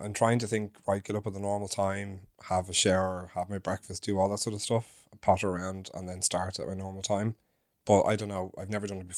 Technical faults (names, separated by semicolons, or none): none